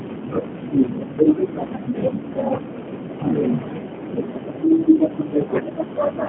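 From the very start and all the way through, this speech has clearly been through a G.729 codec, which fits the 8 kbit/s G.729A variant. It's narrowband, with nothing below about 150 Hz or above 3.4 kHz, so it sounds thin and boxed-in. The codec resynthesises each 10 ms frame from a vocal tract filter and a pitch predictor with only a few pulses, which leaves the plainly audible rough, slightly buzzy, synthetic edge.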